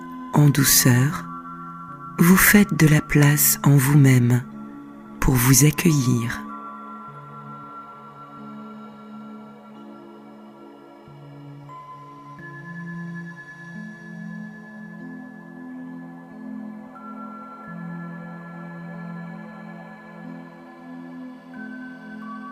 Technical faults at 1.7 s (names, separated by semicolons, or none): none